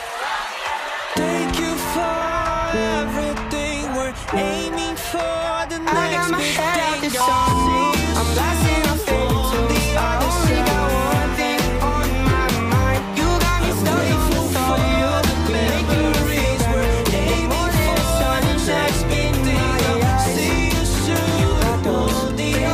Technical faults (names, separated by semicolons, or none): none